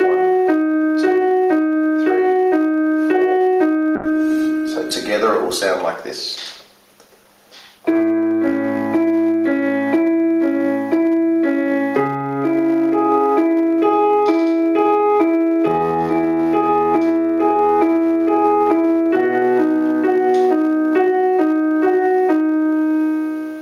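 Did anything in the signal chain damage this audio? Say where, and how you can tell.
Yes. From 3.96 s to 10.19 s the audio turns rough and watery and loses its top end, then clears again. This is a call bitrate drop at the network and codec stage. The call's bandwidth estimate fell, so the encoder was told to spend far fewer bits. It quantised more coarsely and cut the high frequencies. The dullness sounds like a fall from about 96 kbps to about 17 kbps, with the floor lasting about 3.7 s before recovery.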